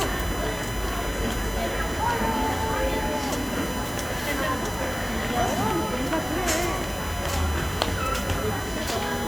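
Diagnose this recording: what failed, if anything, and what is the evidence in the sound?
USB whine, analogue wiring: a 1 kHz tone throughout, roughly 10 dB under the sound, a steady spectrogram line at 1 kHz; 1 ms bus frames leak via ground.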